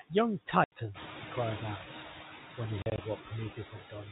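Noise suppressor artifacts run through the whole clip. The suppressor pulls steady noise down by about 7 dB, so the background dips between phrases.

At 0.64 to 0.72 s there is packet loss filled with silence. An 80 ms hole cuts the speech with hard edges, which fits four 20 ms packets dropped in a row.

From 0.94 to 1.81 s the noise suppressor is catching up. The room noise jumps by about 11 dB near 1 s, so it comes through with less reduction before the suppressor adapts over 870 ms.

Between 2.82 and 2.98 s the packet loss returns as scattered gaps. About 80 ms of silence is spread across 160 ms, and the longest gap lasts 40 ms.

From 3.55 s to the end, speech is cut by the noise suppressor. Parts of the final phrase, roughly a third of a second in total, drop by up to about 13 dB and sound swallowed.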